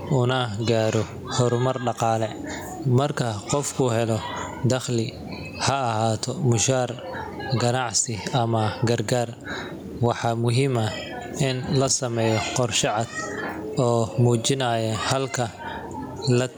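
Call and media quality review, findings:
Gain pumping, entire clip: gain swings by roughly 15 dB under loud syllables; speech dynamics squashed. Likely mic gain far too high, fast limiter clamping every peak. Unlike a noise gate, background never drops out.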